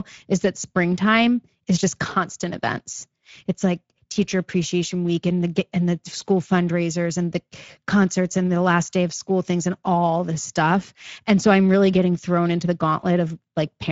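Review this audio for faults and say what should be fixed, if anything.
Speex codec damage runs through the whole recording, and it is plainly audible: the speech sounds hoarse and grainy because the codec has too few bits to model the excitation. The band stops at about 7.7 kHz, which fits a wideband Speex setting near 16.8 kbps. On a spectrogram the content cuts off flat at 7.7 kHz, and the upper band shows smeared noise-like fill instead of clear harmonics. To prevent it, record or transmit with a higher-quality codec setting, or use a modern codec such as Opus.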